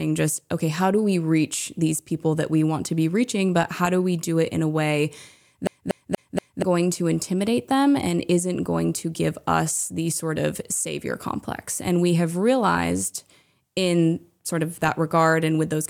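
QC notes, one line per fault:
5.67 to 6.62 s, CD stuck on one turn: after "it in a way" a 238 ms slice repeats four times, each jump marked by a brief mute, before "going to intimidate them". On the waveform, identical blocks with thin gaps; on the spectrogram, copied patterns at even spacing.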